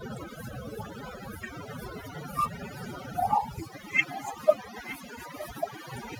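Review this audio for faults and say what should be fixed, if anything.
Overdone noise removal runs through the whole speech clip. The noise reducer cuts individual frequency bands whenever they sit near its noise estimate, so pauses fall to near silence sprinkled with twinkling specks, and quieter speech components vanish. Unlike codec artefacts, the specks cluster where background noise was, not on loud speech. Set the noise reduction to a gentler strength.

From 3.31 to 3.88 s and from 4.84 to 5.23 s, a copy of the speech returns about 916 ms after the original, roughly 10 dB quieter. This is likely an echo leak: a far-end loudspeaker was picked up by its microphone and not fully cancelled. Room reverberation would blur smoothly into the speech, whereas this is a distinct repeat almost a second later. Have the far end use a headset or fix its echo cancellation.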